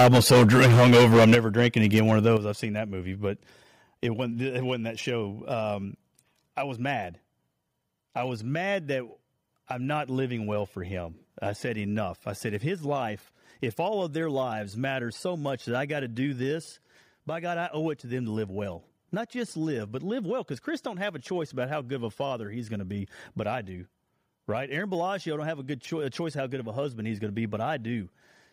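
From 0.0 to 1.67 s the speech is harsh and crackly with flattened peaks. This is likely microphone overload, with the input about 11 dB too hot and nearly a third of samples clipped. A much milder crackle returns at 1.96 to 2.27 s, only about 1 dB over. Unlike codec distortion, the harshness follows the loudest syllables.

At 1.35 s and again at 2.37 s, voice and background fall together, by about 10 dB and then about 8 dB. This is likely the microphone volume stepped down by the call software. Each drop is a single abrupt step rather than a gradual fade.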